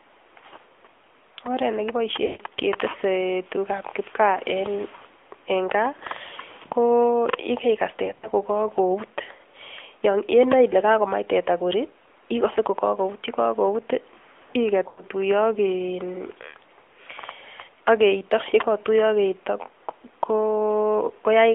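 Throughout the speech, the AMR narrowband mobile codec at a rate that fits 10.2 kbps has rebuilt the voice from a vocal tract model and a few pulses per frame, within a 300 to 3400 Hz line band. Nothing above 3.4 kHz survives, so the voice sounds muffled and thin, and the coding damage is plainly audible as a buzzy, synthetic edge.

Lost AMR speech frames then hit four times, each time leaving the decoder to repeat its last good pitch and vocal tract settings at falling gain. At 2.26 s about 140 ms goes missing, long enough for the sound to smear and sink toward silence before the voice returns weak. At 4.96 s a 60 ms gap gives a short warbling dip. From 8.06 to 8.29 s the losses are scattered, with runs no longer than 40 ms, producing a stuttering, rough patch. At 14.88 s a 100 ms gap stretches and fades the sound briefly.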